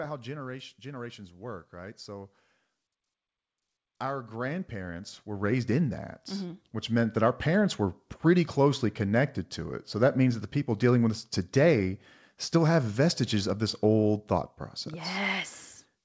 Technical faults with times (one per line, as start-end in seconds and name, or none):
0.05-0.82 automatic gain falling
0.82-2.39 automatic gain rising
4.00-7.24 automatic gain rising